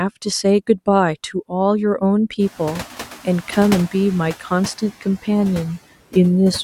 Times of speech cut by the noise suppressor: 5.01-5.28

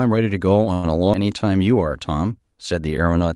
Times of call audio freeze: 0.73-0.86

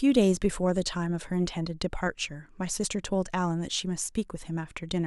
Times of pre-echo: none

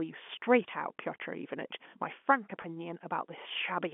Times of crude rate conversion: none

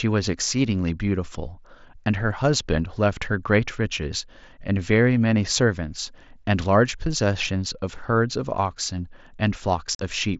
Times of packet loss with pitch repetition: none

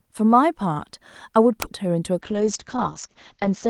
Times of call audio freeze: none

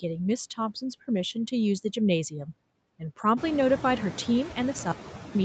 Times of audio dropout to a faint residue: 4.92-5.35

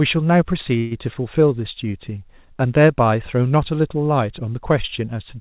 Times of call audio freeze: 0.78-0.93

